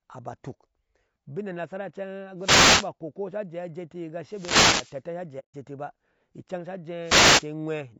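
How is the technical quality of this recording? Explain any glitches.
The recording has audible technical problems: a rough, coded quality runs through the whole speech clip, three short static bursts interrupt it, and one brief dropout occurs.

Throughout, the voice sounds grainy and rough, with noise filling the gaps between harmonics and a thin, somewhat synthetic top end. The likely cause is low-delay AAC compression (AAC-ELD) at a low bitrate, around 32 kbps. Its short frames resolve pitch poorly, so the damage is a steady roughness rather than intermittent breaks.

At 2.38 to 2.90 s, 4.25 to 5.01 s and 7.02 to 7.47 s there are wireless microphone noise hits. Each is a swish of static, caused by the radio signal fading as reflections cancel and receiver noise taking over. Unlike a codec dropout, these events add hiss rather than removing sound.

From 5.39 to 5.54 s there is AAC frame loss with muting, a 150 ms hole that fits about five lost frames. 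The decoder zeroed those frames, and the overlapping windows fade the sound out and back in. The result is a soft-edged silence with no static, which distinguishes it from the radio hits.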